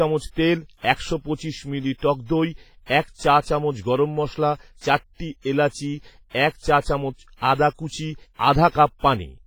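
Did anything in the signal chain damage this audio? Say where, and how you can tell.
Yes, at the codec stage. Throughout the speech there is ringing, washy texture and a hiss that swells and fades with the signal, which points to heavy damage from low-bitrate WMA compression, likely near 24 kbps. Unlike broadband noise, this hiss tracks the signal.

Pre-echo appears at 6.30 to 6.35 s and 8.34 to 8.39 s. A short hiss runs about 50 ms ahead of each sharp attack, leaving the onsets smeared. The transform block spreads noise sized for the loud onset into the quiet moment before it. Echo or reverb would trail after the sound instead.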